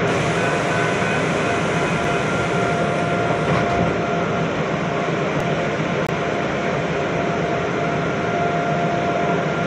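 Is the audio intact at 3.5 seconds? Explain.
Yes, the audio is intact at 3.5 seconds, with no dropout, click, distortion or other fault at that point.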